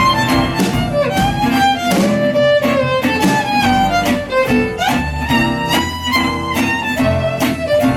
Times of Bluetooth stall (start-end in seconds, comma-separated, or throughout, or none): none